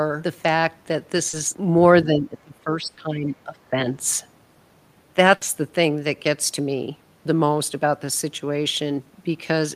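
Speech, with three kinds of fault. A short concealed packet loss at 1.29 to 1.35 s replaces about 40 ms with audio extrapolated from the preceding sound, heard as a brief smear. Between 2.04 and 3.26 s, and again from 3.44 to 3.88 s, the level dips by up to about 15 dB in pieces, roughly a second in the first stretch and a third of a second in the second. This speech suppressed in double talk is likely an echo canceller turning the talker down while the far side speaks. The waveform envelope shows sudden notches. A burst of packet loss at 2.87 to 2.99 s removes 100 ms of real audio. The receiver holds and fades the last sound, so a buzz or hiss decays before speech resumes further on. A second, shorter burst at 5.35 to 5.43 s does the same over 60 ms. Both show as smooth, repeating spectral texture with a falling envelope and an abrupt jump at the far edge.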